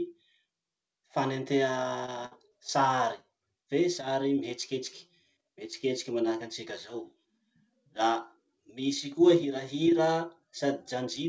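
Around 2.06 to 2.10 s there's a short concealed packet loss: about 20 ms never arrived, so the decoder stretched the previous sound over the hole, leaving a quick smear. Right after, from 2.26 to 2.33 s, a burst of packet loss drops roughly 60 ms. The concealment holds the last sound and fades it into a held buzz or hiss, then jumps ahead with that stretch missing. Another short concealed loss follows at 2.49 to 2.53 s and shows up as a brief wobble. All of this sits on a call path with nothing above 8 kHz, which fits G.722.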